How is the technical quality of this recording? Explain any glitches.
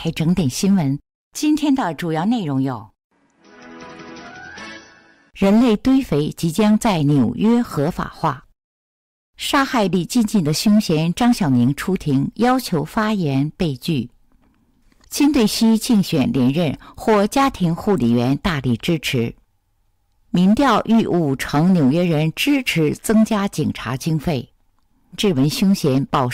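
One glitch stands out near the end. A stream segment skipped at 25.12–25.18 s: the audio jumps ahead with a brief blip, likely a segment that failed to load, so playback resumed at the next one.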